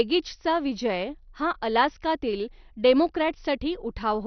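MP2 compression artefacts run through the whole speech clip: the sound is dull and muffled, with nothing above 6.1 kHz and a gurgling, granular roughness. This is likely MPEG Layer II coding starved of bits, which fits a very low bitrate in the region of 48 kbps. With so few bits, the encoder has switched off the upper sub-bands entirely, and the bands that remain flicker in and out and are quantised coarsely, leaving heavy damage.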